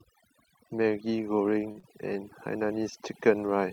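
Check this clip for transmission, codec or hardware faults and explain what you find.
Three faults are present: overdone noise removal across the whole recording, plus two brief network disturbances close together around 1.7 to 1.9 s.

Overdone noise removal runs throughout. A noise reduction stage was set far too aggressively, so any frequency band it judged close to the noise floor was pushed down hard or cut out, and the softer parts of the voice went with it. The background collapses into near silence scattered with twinkling specks.

A short stall from a late packet occurs from 1.71 to 1.77 s. A packet missed its playout time and the jitter buffer emptied, so the receiver held the last sound for about 38 ms until the packet arrived, then resumed from the same point, leaving playback 38 ms further behind. Nothing is lost; a sound is simply sustained too long, with a faint buzz or dip.

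Short concealed packet loss follows from 1.79 to 1.85 s. About 40 ms of audio never reached the decoder, and the receiver covered the gap by extending the preceding sound for roughly 38 ms before blending back into real audio. The result is a brief smear or wobble, and a short sound in that span may disappear.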